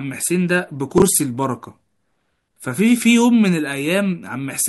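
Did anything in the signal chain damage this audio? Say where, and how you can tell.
Yes: chunks out of order in buffering, 0.98 to 1.02 s. One 20 ms chunk plays a slot late, causing a jumbled moment and three sharp waveform steps.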